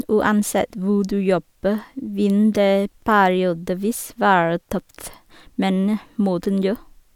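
No technical faults can be heard anywhere in this speech recording.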